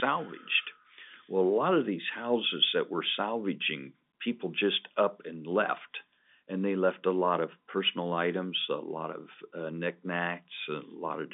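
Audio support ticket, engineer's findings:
No audio faults found.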